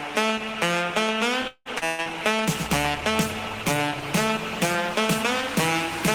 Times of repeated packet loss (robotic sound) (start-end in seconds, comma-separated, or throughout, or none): 1.47-2.09